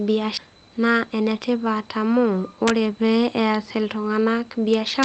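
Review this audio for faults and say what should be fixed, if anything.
Skip ahead at 0.37 to 0.39 s: roughly 0.7 s of queued speech was dropped, on the way or by the jitter buffer when it overflowed, then playback resumed with almost no gap, so the two sides of the missing stretch butt together abruptly. Prevention: size the jitter buffer to absorb the burst, or conceal the loss, instead of dropping the backlog.

Jitter buffer speed-up from 0.47 to 1.40 s: the buffer held more audio than its target. It trimmed many short pitch-period slices, about a tenth of a second in total, so the speech runs at about 109 percent speed with unchanged pitch and sounds hurried. Prevention: spread the catch-up over a longer stretch so each removal is smaller and the speed change stays inaudible.

Integer overflow at 2.68 to 2.70 s and again from 4.74 s to the end: the loudest peaks exceeded the integer range by only about 1 dB, yet they wrapped to the opposite sign instead of being limited, producing harsh cracks far sharper than clipping. 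Prevention: use saturating arithmetic or a limiter before converting to integer samples.

The Opus call path itself, with its band limit at 8 kHz, is not a fault.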